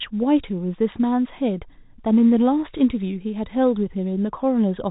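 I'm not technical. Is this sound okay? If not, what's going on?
Yes, this speech is fine, with nothing going wrong in it. It has the narrower, slightly boxy sound of an ordinary landline call, because G.711 telephone coding keeps nothing above about 3.8 kHz, which is normal for a phone line.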